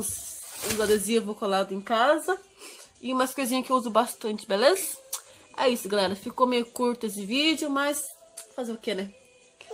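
No technical faults can be heard in this audio.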